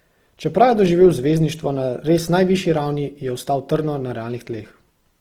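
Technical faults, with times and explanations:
Throughout, Opus compression: speech sounds plainly grainy and rough with noise-filled bands, but with less swirl than MP3; likely CELT-mode coding near 16 kbps, with full bandwidth kept.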